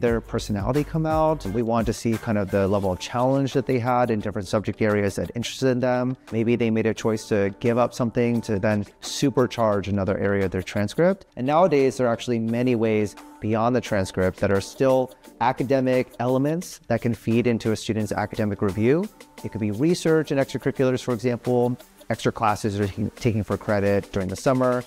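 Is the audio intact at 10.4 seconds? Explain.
Yes, the audio is intact at 10.4 seconds, with no dropout, click, distortion or other fault at that moment.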